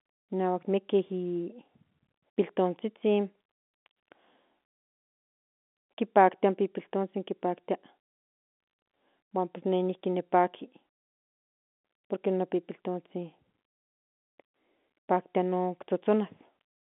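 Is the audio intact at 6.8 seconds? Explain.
Yes, the speech at 6.8 seconds is intact, with no fault at that moment beyond the narrow telephone band of the G.711 line it travels over.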